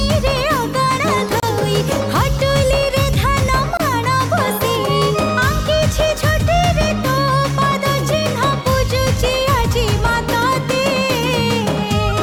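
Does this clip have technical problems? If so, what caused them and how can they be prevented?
Yes. Separately encoded pieces were joined without trimming each encoder's start-up delay and last-frame padding. This leaves a gap at a join of encoded pieces: brief gaps of about 29 ms at 1.40 to 1.43 s and 24 ms at 3.77 to 3.80 s, with smeared edges, after which the sound resumes where it stopped. Trimming each piece's encoder delay and padding before joining, or encoding the whole audio in one run, prevents this.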